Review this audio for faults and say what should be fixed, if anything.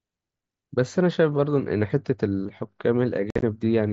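Between 3.30 and 3.43 s the speech turns rough and chopped, with about 83 ms of holes scattered over 120 ms, the longest 52.5 ms, each with abrupt edges. This is unconcealed Bluetooth headset packet loss: voice packets on the mSBC link dropped and were replaced by silence or an idle pattern rather than filled in. Enabling packet loss concealment and keeping the headset close to the phone, away from radio interference, would prevent it.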